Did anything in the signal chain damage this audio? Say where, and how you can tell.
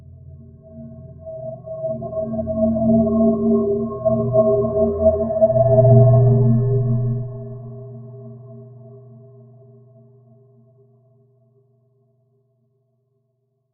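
Yes. Throughout, the level pumps and thins by around 15 dB as held sounds and tails sink: a noise suppressor was applied to music or sounds in call processing.

At 0.0–0.69 s, 0.9–1.25 s and 7.29–12.34 s, steady sound dips by about 6 dB: sound cut by the noise suppressor, which mistook it for noise.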